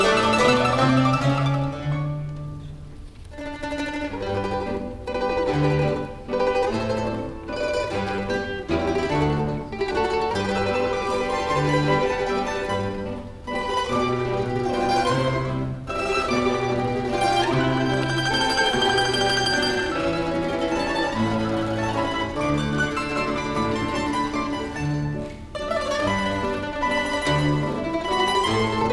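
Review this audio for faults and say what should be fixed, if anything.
Nothing in the signal needs fixing, since no technical fault can be heard anywhere in the audio.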